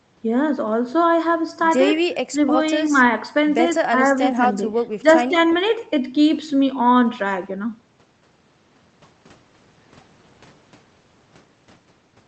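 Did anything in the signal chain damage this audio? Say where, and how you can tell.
Yes, at the call-processing stage. The speech dips in level in short bursts at 2.04–2.09, 2.32–2.38, 2.87–2.94, 3.72–3.99, 4.30–4.66, 5.02–5.06 and 5.24–5.36 s. The dips are about 10 dB, deepening to about 15 dB at 2.04 s and only about 5 dB at 5.02 s. This pattern is most likely speech suppressed in double talk. An echo canceller that cannot separate the near talker from incoming far-end audio attenuates everything while both are active. On a waveform these show as sudden notches in the envelope. On a spectrogram the harmonics fade briefly across the band.

Just after that, at 5.50–5.55 s, a faint delayed copy of the voice slips through, about 25 dB below the speech and trailing it by 135 ms. That offset points to an echo leak, where the far end's loudspeaker output was not fully cancelled and its residue was sent back. 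On a spectrogram it appears as a dim repeat of the preceding formant pattern shifted 135 ms later. The waveform shows only a low-amplitude ripple.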